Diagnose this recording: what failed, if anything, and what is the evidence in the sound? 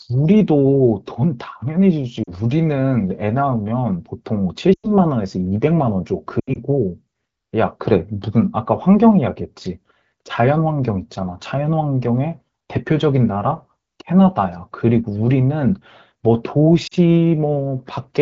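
Lost AMR speech frames on the radio link: quick dips at 2.24 and 16.87 s, longer fades toward near silence at 4.74–4.90 and 6.39–6.58 s, where the decoder reused the last good frame's settings with falling gain.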